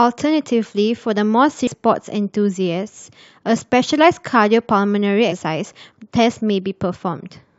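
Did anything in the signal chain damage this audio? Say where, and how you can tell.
Yes, at the codec or storage stage: damaged data in a compressed stream. Brief disturbances at 1.66 s and from 5.31 to 5.33 s come from the decoder misreading corrupt frames before regaining sync.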